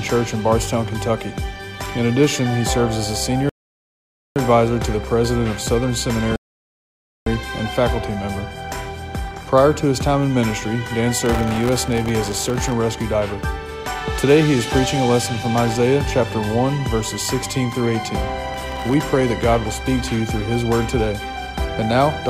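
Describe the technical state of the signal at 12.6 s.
At 12.6 s there is processor overload crackle, running from 11.26 to 12.72 s. The processor repeatedly misses its deadlines for buffers well under a millisecond long. Each miss drops in a brief hard-edged silence. Many such gaps together sound like gritty crackle.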